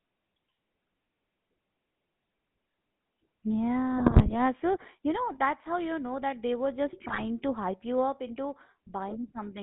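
GSM full-rate codec coding runs through the whole recording. The codec rebuilds speech from a vocal-tract model driven by a sparse pulse train, and its sound fits 13 kbps full-rate coding. The band sits between about 150 Hz and 3.6 kHz, with a plainly audible buzzy, gravelly roughness.

GSM bit errors break in from 3.98 to 4.35 s and again from 7.08 to 7.42 s. Corrupted filter, pitch and gain parameters reach the decoder, so frames come out with warped spectra or sudden level jumps. Both stretches turn into squawks, pops and gargling.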